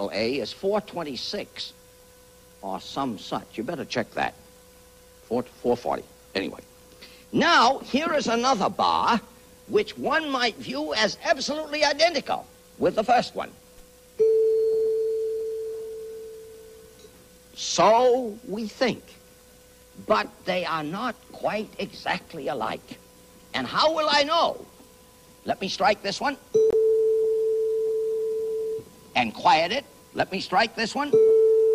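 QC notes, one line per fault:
26.70–26.74 s, corrupt frame muted: the audio drops abruptly to silence for about 38 ms, which fits two compressed frames rejected by the decoder and replaced with silence, with timing preserved.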